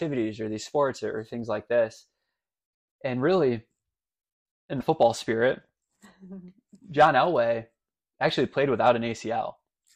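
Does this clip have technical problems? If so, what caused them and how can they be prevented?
Yes. At about 4.80 to 4.83 s the sound jumps ahead, and right after the jump there's a short glitch lasting roughly one 26 ms frame. That's likely a broken MP3 bit reservoir: frames got cut out of the stream, so the frame after the gap reached back for data it had parked in earlier frames and decoded bytes from some other frame instead. To prevent it, keep MP3 streams intact, or cut and splice them with tools that respect frame and reservoir boundaries.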